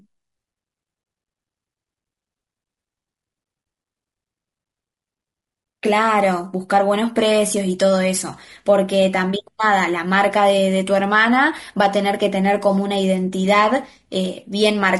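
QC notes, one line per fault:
Throughout, low-delay AAC compression: the speech sounds rough and grainy, with a noisy haze between the harmonics and a thin, synthetic top end. That's likely a low-delay AAC coder, whose short frames blur pitch detail, running at something like 32 kbps.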